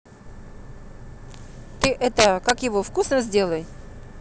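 Speech with integer overflow from 1.84 to 2.50 s: peaks driven about 4 dB past the limit wrap to the opposite sign, giving violent cracks far harsher than clipping's flattened tops.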